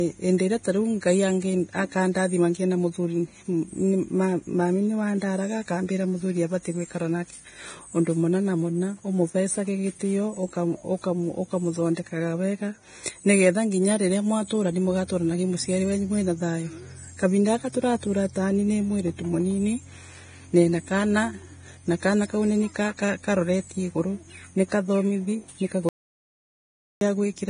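Vorbis compression runs through the whole clip, and it sounds heavy: there is nothing above 9.7 kHz, and the remaining treble has turned hissy and grainy, with speech sibilants smeared into noise and consonant onsets softened. The likely cause is a low-quality Vorbis encode that lowered the cut-off and quantised the upper residue so coarsely that fine detail became noise of similar energy. The damage fits a bitrate somewhere around 22 kbps.

An audio dropout to silence occurs from 25.89 s to 27.01 s. The speech cuts off abruptly, and for about 1.12 s there is silence with no room tone underneath, before the sound returns mid-flow. Whatever was spoken in that stretch is simply gone. This points to a loss of input, likely from a momentary disconnection or mute, while the recording chain kept writing silence.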